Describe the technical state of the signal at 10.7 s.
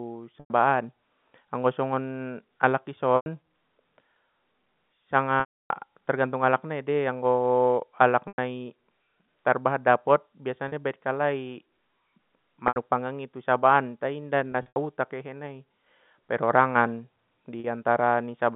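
Packet loss with pitch repetition occurs from 10.68 to 10.72 s, just before "i baen". About 40 ms of audio went missing, which fits two lost 20 ms packets. The receiver filled the gap by repeating the last pitch period of the speech, so the loss sounds like a brief, slightly held, buzzy tone rather than a dropout. The G.711 telephone band, roughly 150 Hz to 3.6 kHz, carries on through the gap.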